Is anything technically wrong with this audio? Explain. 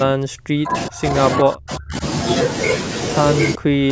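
Yes. The speech drops out three times: 0.03 to 1.17 s, 1.41 to 2.03 s, and 3.55 s to the end. Each dip falls by up to about 40 dB. This is likely speech suppressed in double talk, where an echo canceller mistakes the talker for echo and mutes both.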